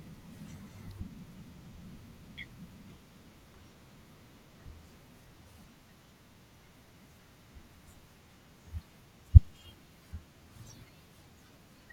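It's a speech recording with one electrical switching spike at about 0.91 s, right near the start. You hear a sharp snap or a tight cluster of clicks sitting on top of the audio, over in just a few milliseconds and fairly quiet, peaking somewhere around -45 dBFS. It's most likely a nearby switch, relay or static discharge throwing off a brief arc that the audio line picked up, rather than anything in the recording chain.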